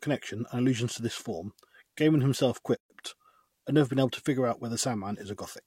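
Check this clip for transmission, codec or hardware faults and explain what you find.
Two faults are audible in this speech clip.

At 2.19 s a sharp, isolated snap sits on top of the speech, an electrical switching spike, likely from a nearby switch or discharge arcing into the audio line.

From 2.77 to 2.9 s the speech drops into a 130 ms gap with smeared edges. This is a gap at a join of encoded pieces, where separately encoded pieces were joined with their encoder start delay and final-frame padding left in.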